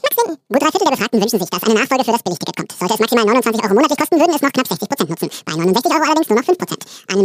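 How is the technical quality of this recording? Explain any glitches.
The recording has one real problem, and it's present from start to finish: the audio was read two samples at a time, so the whole clip plays at double speed. The speech runs twice as fast as it should and sits a full octave high, 12 semitones up. What's going on is that the playback side grouped each pair of samples into a single frame, as if the data held two channels or samples twice as wide, so every stretch of time gets squeezed into half its length.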